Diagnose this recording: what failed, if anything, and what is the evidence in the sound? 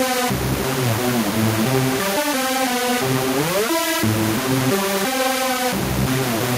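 Nothing failed: no stage in the chain, from capture through to playback, leaves an audible defect anywhere in this recording of sounds.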